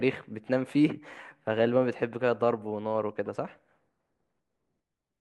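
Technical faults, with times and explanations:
3.26 s, corrupt frame decoded: a brief faint glitch in the speech where a couple of damaged compressed frames were decoded anyway, putting stray energy at wrong frequencies.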